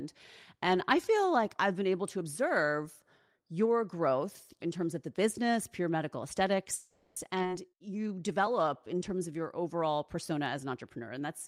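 At 6.75 to 7.18 s the speech stops advancing and the last sound is stretched into a buzzy, fading continuation for 410 ms, with no true silence. This is a call audio freeze, likely caused by delayed packets draining the jitter buffer. When the audio resumes it picks up where it stopped, so nothing is lost, but the playback delay grows by 410 ms.

At 7.42 to 7.45 s there is a skip ahead. Roughly a fifth of a second of speech is discarded. Only about 10 ms of fill bridges the join, so playback jumps abruptly forward and the delay shrinks by about the same amount.

From 7.70 to 9.38 s a jitter buffer slow-down follows. The receiver repeats single pitch periods and fragments of pauses to rebuild its reserve, adding 186 ms. The speech runs at 89% speed with unchanged pitch, so sounds are audibly drawn out.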